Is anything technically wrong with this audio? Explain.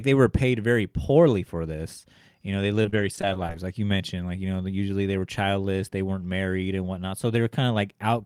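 Yes. Between 2.73 and 3.54 s the speech suffers repeated packet loss, giving a robotic sound. Short holes arrive one after another, the longest about 31 ms, and each is patched by stretching the last bit of sound. Roughly a fifth of a second ends up rebuilt, and about 16% of that stretch is concealed. It sounds choppy, with pieces missing. A spectrogram shows frozen, smeared harmonic bands broken by abrupt vertical edges, and the waveform shows abrupt envelope steps and repeated cycles.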